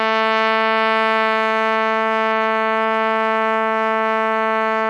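No technical faults are audible.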